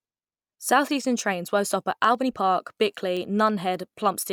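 A short speech clip with periodic USB or driver dropouts. Starting at 2.15 s, right after "trains won't stop at", about three ticks occur every 1.02 s, until 4.19 s. Each is a skip of a small fraction of a millisecond. A background task is stalling the audio path at a fixed interval.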